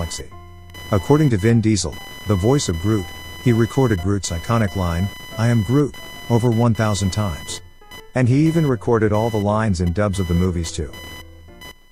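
Computer activity noise runs through the whole clip: a chirping, buzzing layer pulsing roughly a thousand times a second, about 20 dB below the sound, as processor or graphics load shifts the shared ground. On a spectrogram it shows as a comb of horizontal lines at multiples of 1 kHz that ignore the audio's own contours.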